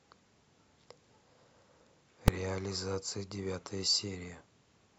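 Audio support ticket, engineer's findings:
Invalid numbers at full scale, 2.28 s. Processing stage produced infinite or invalid values, clamped to maximum amplitude. Output pinned at one extreme value for about 2.9 ms, which fits a 128-sample block. Too brief for separate pops: heard as one sharp bang in the speech.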